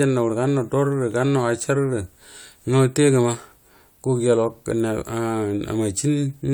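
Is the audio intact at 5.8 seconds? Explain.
Yes, the speech at 5.8 seconds plays through intact, with no fault at that moment.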